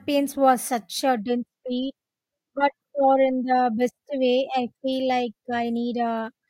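Listening to the speech recording, nothing stood out as a technical problem.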